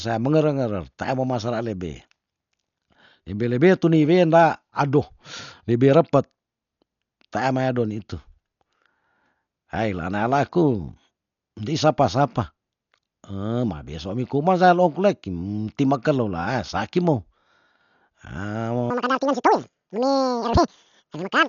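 Speech, heard through heavy codec damage from start to finish: it sounds dull and rough, with fluttering noise around voiced tones and nothing above 7 kHz, which fits Dolby Digital compression at a low bitrate near 48 kbps. On a spectrogram this shows as a hard ceiling at 7 kHz with speckled, blocky noise filling the gaps between harmonics. From 18.90 s to the end at 21.49 s, the section at the wrong speed likely comes from a clock mismatch during playback or editing. It runs 1.98 times too fast and jumps around ten semitones higher, so the speech turns hurried and chipmunk-like. The spectrogram shows the harmonics stretched upward, and the waveform's syllables are squeezed to roughly half their spacing.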